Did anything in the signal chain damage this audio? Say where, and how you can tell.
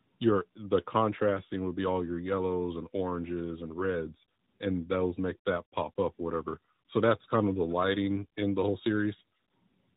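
Yes, tandem speech coding at the codec stage damages the whole clip: speech sounds rough, muffled and warbly, with nothing above 3.8 kHz. It passed CVSD, then G.711 A-law, then AMR-NB at 12.2 kbit/s, each coder re-encoding the previous one's artefacts.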